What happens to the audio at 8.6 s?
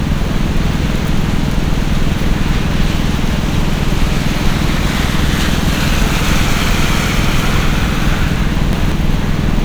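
A chunk arrived late and was played two chunks after its proper place, so the audio from 8.36 to 8.92 s runs out of order in roughly 186 ms pieces. Nothing goes missing, but the sequence jumbles and there are three hard joins.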